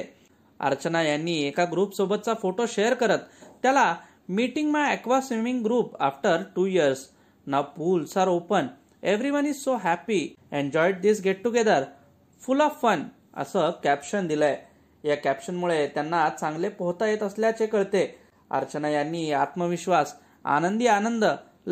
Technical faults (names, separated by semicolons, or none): none